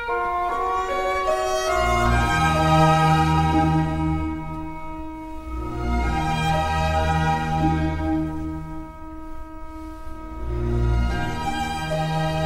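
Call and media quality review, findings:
No audible faults found in the clip; nothing to attribute to any component.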